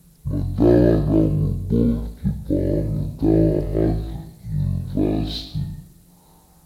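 Stereo read as mono, throughout this speech: left and right samples play back-to-back as one channel, halving the speed and dropping the pitch an octave.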